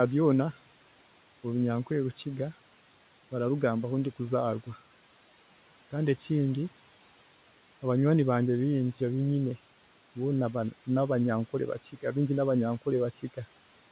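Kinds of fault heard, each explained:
Speech cut by the noise suppressor: just after "boona nabanyankore", between 11.83 and 12.03 s, the suppressor treated a soft stretch of speech as background and turned it down by about 9 dB along with the room noise, so roughly a tenth of a second sounds swallowed and faint. Unlike a packet-loss dropout, the sound never falls to silence or clicks. It thins and dips, and the steady room noise, about 21 dB below the speech, dips with it.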